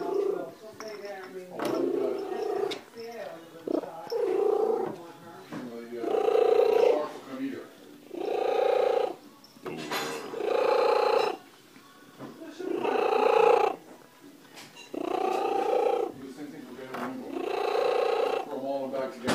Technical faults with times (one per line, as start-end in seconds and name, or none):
none